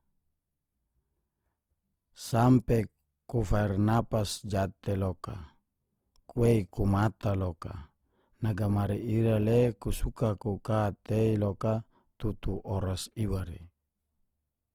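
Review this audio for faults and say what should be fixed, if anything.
Opus compression throughout: the speech sounds grainy and rough from noise-filled bands, though it still reaches about 20 kHz, likely from an encode near 24 kbps. Encode from the original at a higher bitrate to avoid it.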